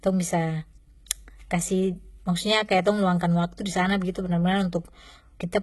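HE-AAC compression damage runs through the whole recording, heavy from the first second to the last. The speech has a dull, band-limited core with a bright but artificial top, and nothing is present above 11.8 kHz. The likely cause is spectral band replication: the upper band is rebuilt by copying lower-frequency content upward, so its harmonics fail to line up with the real voice. That leaves s sounds gritty and lispy, a degree of damage that points to a very low bitrate, around 16 kbps.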